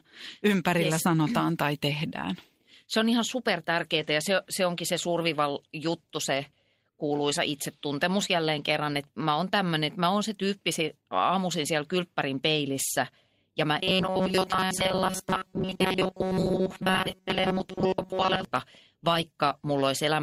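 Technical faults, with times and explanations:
3.99–4.05 s and 8.93–8.95 s, lost packet rebuilt from error correction: no gap, but 40 ms and 20 ms of rougher, noisier low-bitrate copy.
13.79–18.45 s, robotic sound from repeated short buffers: rigid metallic 188 Hz buzz, likely from a roughly 5 ms buffer replayed over most of the audio; spectrogram shows evenly spaced harmonic stripes.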